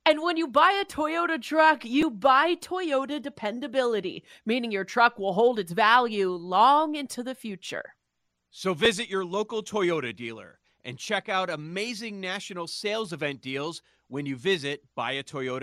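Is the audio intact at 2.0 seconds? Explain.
No. At 2.01 s there is a repeated buffer fault. Fresh audio failed to arrive in time, so the playback device replayed its last block of about 5.8 ms, which fits a 256-sample buffer, twice more. Because the block is so short, it is heard as a click or brief buzz rather than a stutter, and roughly 10 ms of speech is lost. A waveform shows an identical short segment tiled three times with abrupt joins. A spectrogram shows a thin vertical broadband stripe.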